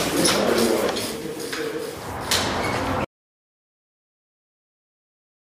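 At 3.05 s the audio cuts out mid-flow and stays silent until the end of the clip, a gap of about 2.4 s. This is an audio dropout to silence, likely caused by the input being lost while recording carried on writing nothing. What separates it from a quiet pause or a fade is that the room tone vanishes too and does not come back, so whatever followed is simply gone.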